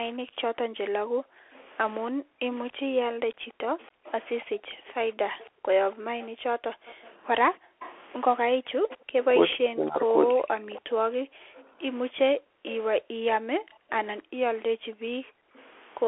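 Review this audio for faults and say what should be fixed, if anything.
The Bluetooth CVSD headset codec shapes the whole clip. Nothing above 3.8 kHz survives, and the usable band sits at roughly 300 to 3400 Hz, so the speech is narrowband and dull. The damage is plainly audible. The one-bit delta stream cannot follow fast, loud high-frequency movement, so sibilants turn scratchy and a granular hiss sits under the voice. Prevention: route the headset over a wideband profile such as mSBC or LC3 instead of CVSD.

Speech suppressed in double talk occurs three times: between 0.28 and 2.41 s, for only a few brief moments; from 9.49 to 10.72 s, for about a second in total; and at 15.36 to 15.41 s. The talker's level collapses by about 35 to 40 dB in these spots. This is likely an echo canceller treating simultaneous far-end speech as echo and attenuating everything. Prevention: tune the canceller's double-talk detector so it holds near-end speech rather than suppressing it.

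Background gated by the echo canceller runs from 0.69 to 15.06 s. The room tone repeatedly drops by as much as about 40 dB, adding up to roughly five seconds of missing ambience, and returns each time the canceller releases. The effect is a pumping, on-off background behind the speech while the loudspeaker path is active. Prevention: replace hard gating with gentler residual suppression or comfort noise so the ambience stays continuous.

An echo leak is audible from 1.54 to 15.66 s. A copy of the voice returns 279 ms late, about 25 dB below the speech. The likely cause is a loudspeaker on one side whose canceller did not fully remove what its microphone picked up, sending the residue back into the call. Prevention: improve echo cancellation at the loudspeaker end, for example by lowering loudspeaker volume or using a headset there.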